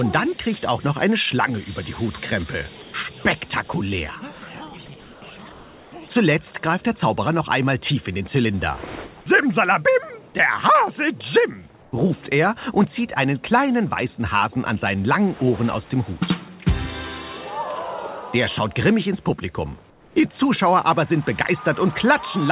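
Comfort noise in place of the background shows up at 2.82–2.94, 5.02–5.22, 5.52–5.92, 11.82–11.92 and 19.9–20.16 s. The real background goes flat and featureless, about 2 dB quieter (1 dB in the fourth), and about 5 dB quieter in the last one. That's likely discontinuous transmission on this narrowband call path.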